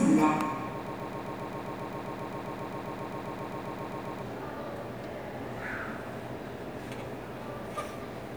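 A recording of sounds, caught in a broken-record loop from 0.87 s to 4.22 s. A fragment about 0.13 s long repeats exactly, back to back, 25 times, producing a rapid, mechanical stutter at roughly 7.5 repeats per second before normal sound resumes. The likely cause is a stalled player, encoder or stream that kept resending the last piece it held, so the sound that belonged to those three-plus seconds is missing entirely.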